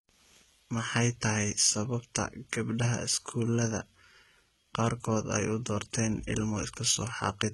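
From start to finish, the upper range sounds bright but synthetic, with s sounds gritty and metallic and nothing above 11.8 kHz. This is likely HE-AAC compression, heavy enough to fit about 16 kbps. Unlike a plain low-pass, the treble survives, rebuilt by copying lower bands upward, so its harmonics don't line up.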